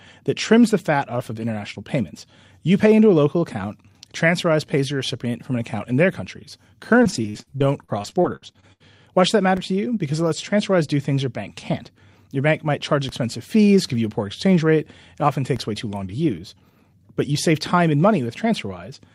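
From 7.03 to 8.82 s, repeated packet loss strikes: fifteen gaps open up, the longest 73 ms, and each hole is patched by stretching the preceding sound. With about a quarter of the stretch rebuilt this way, the speech turns choppy and robotic.

DC steps follow at 9.57 s, between "should that" and "to you"; at 13.09 s, between "bank might charge" and "fees give you a"; and at 15.56 s, just before "way too long to". Each time the waveform's zero line jumps and then drifts back, leaving a low thump under the unchanged speech.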